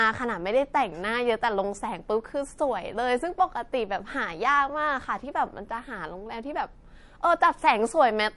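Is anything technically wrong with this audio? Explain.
Yes. MP3 compression, throughout: nothing above 11.3 kHz and a plainly watery, swirly quality, likely from a bit-starved encoder cutting treble and dropping weak frequency lines, which fits a 48 kbps encode.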